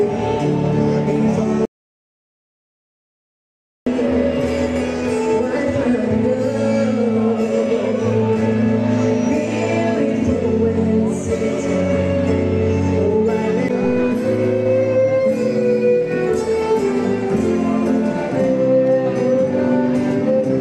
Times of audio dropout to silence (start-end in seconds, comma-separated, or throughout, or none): 1.65-3.86